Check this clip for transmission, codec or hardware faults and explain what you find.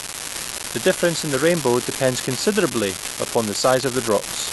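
There is one hardware fault, an unreliable data bit, present for the whole clip. One marginal data line flips its bit in random samples, and each error adds a spike of identical size. The result is a steady crackle or fizz that continues through the pauses between speech. Clipping or overload distortion would appear only on loud passages and vanish in silence, so the fizz in the gaps points to this fault instead.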